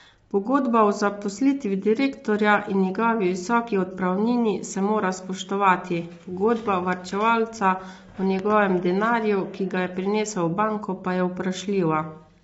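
From start to finish the speech carries plainly audible low-delay AAC compression: a rough, grainy texture with noise filling the gaps between pitch harmonics, and nothing above 7.7 kHz. The likely cause is AAC-ELD coding at a low rate, which fits about 24 kbps. Its short frames cannot separate closely spaced harmonics cleanly. On a spectrogram the harmonic stripes look smeared and speckled, and the whole image ends in a flat ceiling at 7.7 kHz.

At 8.39 to 8.54 s, just after "pogodba varčevalca o" and before "denarju ki ga je", a loud pop sounds as two sharp pops in quick succession while the speech continues underneath. They peak at roughly 10 dB above the speech and likely come from an electrical step or pulse, such as a plug, switch or static discharge. On the waveform they appear as two tall spikes rising well above the speech envelope. On a spectrogram they show as two thin vertical lines spanning the full band.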